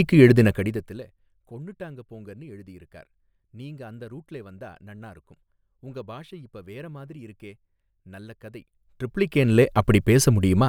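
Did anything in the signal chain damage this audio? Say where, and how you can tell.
Yes. From 0.42 to 1.13 s a fine ticking, a zipping texture, rides on the speech as its level drops by about 25 dB, and the same rasp returns from 8.62 to 9.66 s as the level climbs back by a similar amount. This is zipper noise from the gain stage in the driver or buffer processing: the level is changed in discrete jumps, around 70 a second on the way down and 50 on the way up, with no smoothing, so each jump leaves a small click.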